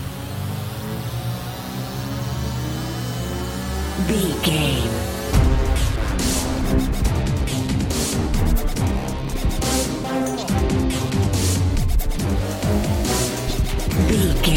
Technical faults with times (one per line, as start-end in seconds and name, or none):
none